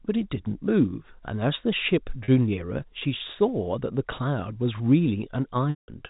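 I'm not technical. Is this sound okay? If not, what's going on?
No. Packet loss with pitch repetition at 2.24 s and 5.70 to 5.88 s: lost audio is patched by repeating sound, giving a brief buzz, then a longer fade.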